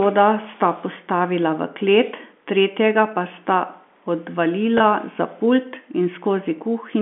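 Around 4.78 to 4.80 s there's a quick packet loss with pitch repetition. About 20 ms drops out, which fits one lost packet, and the receiver patches the gap by looping the last pitch period, so the speech catches on a tiny held, buzzy blip.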